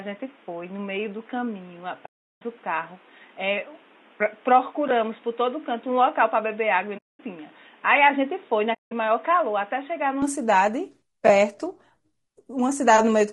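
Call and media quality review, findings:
Low-delay AAC compression, whole clip: speech rough and grainy, noise filling the gaps between pitch harmonics. Likely AAC-ELD at a bitrate consistent with about 32 kbps. Short frames give coarse frequency resolution, so harmonics smear and bits run short, leaving plainly audible codec damage throughout.

Input switched to a poorer device, 0.00 to 10.22 s: dull, band-limited speech, nothing above 3.8 kHz, new background noise about 30 dB under the signal, level about 5 dB down. Likely cause is capture on a narrower, noisier microphone or headset call profile. At 10.22 s the sound clears up again, with no silence at the switch.

AAC frame loss with muting, three soft-edged holes: 2.05 to 2.42 s (360 ms), 6.97 to 7.20 s (220 ms), 8.73 to 8.92 s (180 ms). The lost frames were decoded as zeroed spectrum. Overlapping transform windows fade the speech out and back in, so each gap has soft edges. 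The durations fit runs of roughly 20 ms frames.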